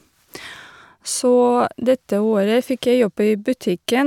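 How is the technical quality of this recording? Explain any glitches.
Nothing in this recording stands out as a glitch, so there's really nothing technical to flag.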